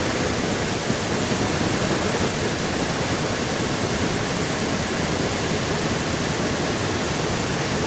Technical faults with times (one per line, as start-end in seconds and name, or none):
0.00-7.86 echo leak